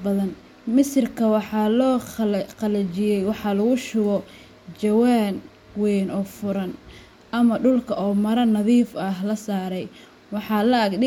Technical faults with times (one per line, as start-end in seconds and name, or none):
none